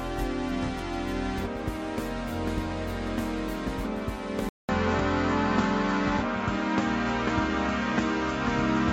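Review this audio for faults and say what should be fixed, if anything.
The recording likely switched its input to a poorer device at 4.49 s, a sudden input device change that holds to the end. A 200 ms silence marks the switch, and then the music loses everything above 7.6 kHz, turning dull and boxy. The level shifts by about 5 dB, and a faint new noise floor appears well below the signal. To prevent this, lock the recording input to one device and disable automatic switching during the session.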